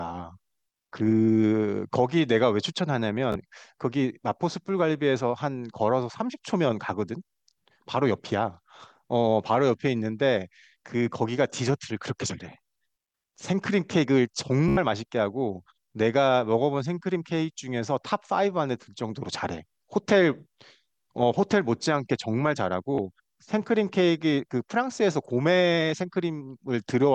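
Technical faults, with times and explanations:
3.32–3.36 s, 14.68–14.77 s and 22.95–22.98 s, Bluetooth stutter: the receiver repeats its last short slice of speech while late packets are missing, making a brief buzz of about 29, 87 and 29 ms. This differs from a dropout's silence. Speech then resumes further on.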